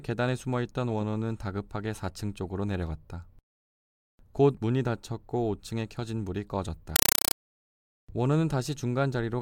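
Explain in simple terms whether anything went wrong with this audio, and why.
A burst of loud, chattering static replaces the speech from 6.96 to 7.35 s. This is a compressed stream played as audio: undecoded data, likely Dolby Digital, pulsing 31 times a second.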